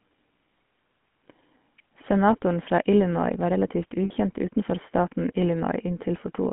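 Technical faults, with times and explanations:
Throughout, GSM full-rate codec: the full-rate GSM vocoder, which fits a 13 kbit/s stream, rebuilds speech from pulse excitation within a 150 to 3400 Hz line, leaving a plainly buzzy, gravelly roughness.
4.04 to 4.11 s, lost GSM frames: about 60 ms of frames, which fits three lost frames, went missing between "var relativt" and "utenfor staten", and the decoder repeated the last good frame, giving a brief rough, metallic ring.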